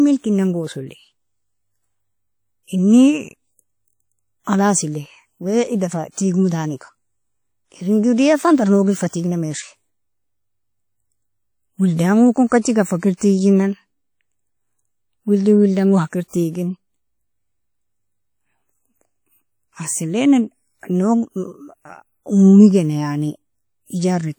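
Throughout the speech, the audio has likely passed through WMA compression, a transform codec working at a low bitrate. The damage is plainly audible: its coarse quantisation noise spreads across long blocks, so the voice takes on a ringing, washy quality with a hiss that swells and fades with the level. The strain suggests a rate of roughly 48 kbps, even though the spectrum still extends up to about 20.1 kHz.

At 9.08 to 9.13 s, the same block-based coding produces pre-echo. An abrupt attack lands late in a transform block, and the noise budgeted for the loud onset is spread over the quiet moment just before it. A hiss of about 46 ms runs ahead of the attack, which sounds blunted and smeared. A second, shorter pre-echo of about 28 ms follows at 12.49 to 12.52 s, with the same soft, hissy lead-in.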